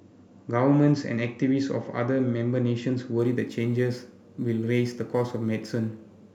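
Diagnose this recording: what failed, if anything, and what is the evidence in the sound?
Crude rate conversion at the sample-format stage, starting at 3.19 s and running to the end. From there the speech picks up a gritty, inharmonic fizz that clings to the louder and brighter sounds and doesn't track the pitch. It sounds like samples being repeated rather than filtered, which fits a nearest-sample jump from 44.1 kHz to 48 kHz. The repeat pattern produces spurious tones sitting roughly 35 dB under the speech.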